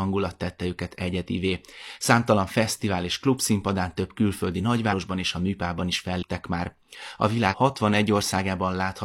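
Speech with compressed frames skipped: at 4.88–4.93 s, 6.18–6.23 s and 7.48–7.54 s, whole blocks of the encoded stream never reach the output, either because they are absent from the file or because the decoder rejects them as damaged. The speech lurches forward by roughly 100 ms, 150 ms and 100 ms, jumps that fit a loss of two or three 46.4 ms frames.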